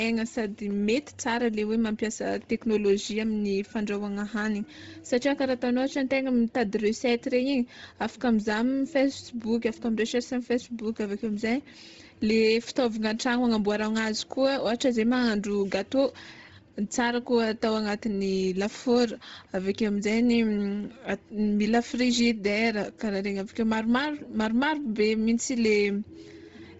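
From start to end the speech has a breathy, grainy edge and nothing above 7.8 kHz. This heavy damage points to a low bitrate near 24 kbps, likely from Bluetooth LC3 compression. A spectrogram shows a hard ceiling at 7.8 kHz with speckled, noise-filled upper bands.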